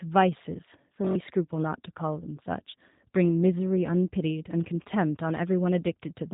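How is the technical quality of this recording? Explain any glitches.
The technical quality is limited by low-bitrate codec processing, plainly audible from start to finish.

G.729 codec: Across the whole clip the speech has the rough, slightly synthetic texture of G.729 coding, which fits the 8 kbit/s G.729A variant. The codec models speech as a vocal tract filter driven by a pitch predictor and a sparse set of pulses every few milliseconds, so fine detail is rebuilt rather than kept. The result is plainly audible buzziness, and nothing reaches above 3.8 kHz, leaving the sound narrow and muffled.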